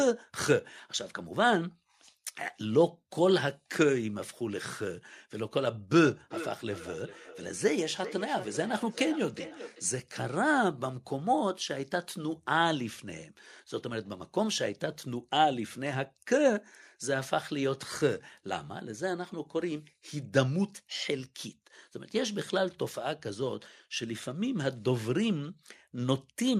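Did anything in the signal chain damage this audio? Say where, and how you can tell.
Yes. From 6.05 to 9.9 s the call processing breaks down into feedback echo between two devices. Speech returns at a fixed spacing of roughly 400 ms, peaking about 13 dB below the direct sound, thinner and more ringing each time. A second device's playback re-enters this microphone, beyond its own echo canceller. A spectrogram shows faded, evenly spaced copies of each syllable.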